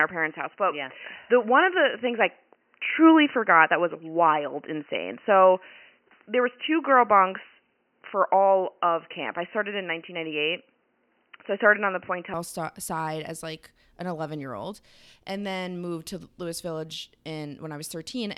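Speech, dull and boxy from the start to 12.34 s, with nothing above 3 kHz. A very faint extra noise floor sits there too. At 12.34 s it clears without a gap and the level shifts by around 5 dB. Likely cause: input switched to a poorer device.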